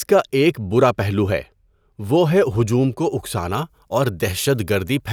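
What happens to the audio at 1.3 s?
Nothing goes wrong at 1.3 s: the speech carries on intact through that moment, with no dropout, click or other fault.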